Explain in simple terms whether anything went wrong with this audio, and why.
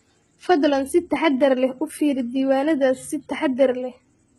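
Across the whole speech clip, s sounds turn gritty and metallic, likely from heavy HE-AAC compression. The treble up to 11.8 kHz is rebuilt from copied lower sounds rather than simply muffled away.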